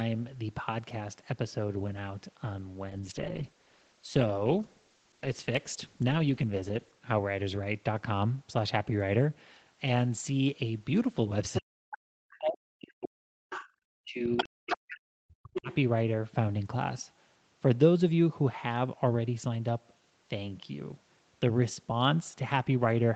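It's a speech clip off a call, and the first thing you'll catch is a call bitrate drop from 2.93 to 7.03 s. The rate falls from 32 kbps to 11 kbps and sits at the bottom for about 4 s, so Opus has far fewer bits to work with and codes everything more coarsely, giving a rough, watery texture until it climbs back up. Later there's the other side's voice leaking through, likely loudspeaker echo the canceller didn't fully strip from the mic, at 11.54–11.97, 12.30–12.36, 13.50–13.68, 14.37–14.77 and 15.54–15.75 s. The loudest bits come in only about 5 dB under the talker and the faintest around 30 dB down. Overlapping that, there's speech suppressed in double talk from 11.6 to 13.58 s and 14.03 to 15.69 s. The talker dips out in chunks, dropping as far as roughly 40 dB, likely because the canceller couldn't tell them apart from the echo and turned both down.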